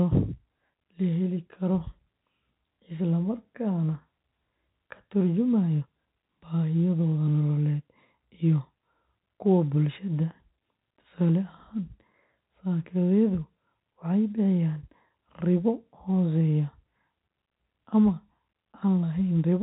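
No faults can be heard anywhere in this speech recording. The G.711 telephone coding is audible as a narrow band with nothing above about 3.9 kHz, and any quantisation noise riding under the speech is faint at most.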